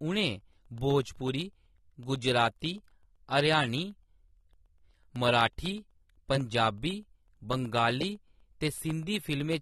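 From the start, the speech sounds dull and smeared, with nothing above 12.8 kHz and a fizzy, warbling edge on sibilants. This is likely AAC compression. The damage is plainly audible and fits AAC-LC at a low bitrate near 32 kbps, with bands dropped or coarsely quantised.

From 0.16 s to 9.53 s, periodic USB or driver dropouts break the signal every 0.125 s, around seventy times. Each one cuts out about half a millisecond and fills it with silence. The result is a steady ticking, eight per second, under the speech.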